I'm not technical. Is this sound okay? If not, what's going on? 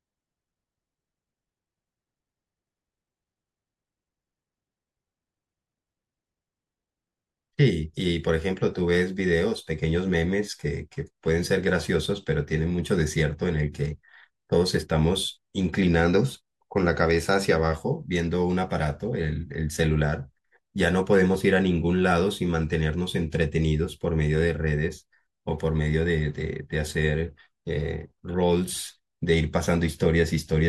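Yes, this sound is okay, and nothing is going on that needs fixing.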